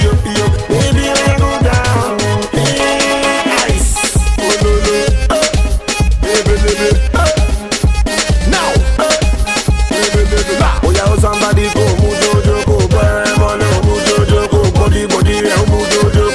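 No technical faults are audible.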